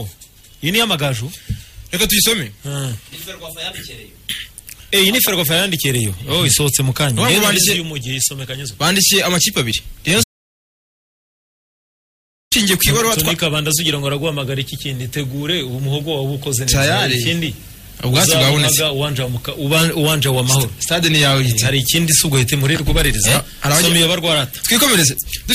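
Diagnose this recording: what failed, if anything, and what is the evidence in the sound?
A single loud pop at 5.28 s rises roughly 10 dB above the surrounding audio, with the sound continuing underneath. This points to the analogue wiring stage, likely a voltage step from a plug, switch or static discharge that the downstream circuitry shaped into a sharp transient.

An audio dropout to silence runs from 10.24 s to 12.52 s, about 2.3 s of silence with no room tone at all, and whatever was playing in that span is lost. The likely cause is a lost input, such as a disconnected device or failed link, while the recorder kept writing silence.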